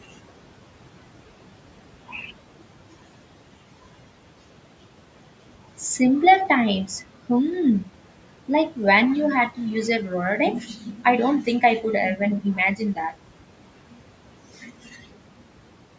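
Noise suppressor artifacts run through the whole clip. The suppressor pulls the room noise down by about 12 dB frame by frame, so the background, sitting about 19 dB below the speech, drops away between phrases and returns under them.

From 10.66 to 11.05 s, just before "I don't", the suppressor mistook part of the speech for noise and cut it along with the background. About 300 ms of speech is turned down by as much as about 9 dB, leaving the sound faint and swallowed.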